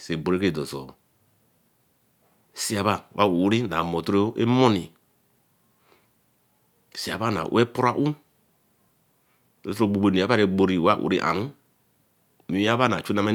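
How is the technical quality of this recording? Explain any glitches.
No technical faults are audible.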